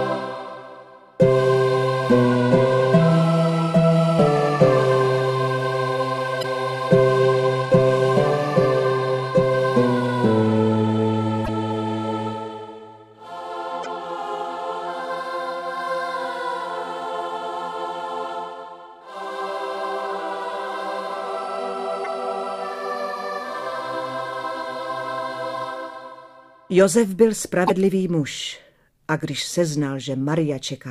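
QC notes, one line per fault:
6.39, 11.43, 13.81, 22.01 and 27.65 s: damaged data in a compressed stream. Each roughly 56 ms burst is corrupted bytes the decoder misreads, losing frame sync until it finds the next header, so garbled output sounds as a short chirp or squawk.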